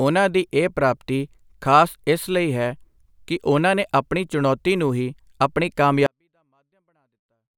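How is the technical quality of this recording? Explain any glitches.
The speech collapses to near silence at 6.06 s and stays there until the end, because of a 24-bit alignment error (too quiet). Just after "ਚੁਣੌਤੀ ਨੂੰ ਹੀ ਆਪਣੀ", samples packed into the low 24 bits of each 32-bit word were read as full 32-bit integers. Each value then sat 8 bits too low, losing about 48 dB in one step. The sound stays clean and undistorted but becomes almost inaudible for the last 1.5 s.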